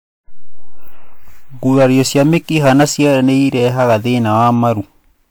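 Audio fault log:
throughout, generation loss: the whole clip has a swirly, smeared, hollow quality with blurred attacks, worse than one encode at around 128 kbit/s would leave. The likely cause is about three passes through a lossy WMA-type codec, each on a shifted frame grid, so noise and spectral holes stack up. Content still reaches about 20.1 kHz, which rules out simple band-limiting.
1.70–3.96 s and 4.34–4.68 s, hard clipping: the peaks are cut flat, overdriven by about 8 dB in the first stretch and about 3 dB in the second. This gives a harsh fuzz first and then lighter crackle. Unlike codec smear, this distortion follows loudness and adds bright upper harmonics.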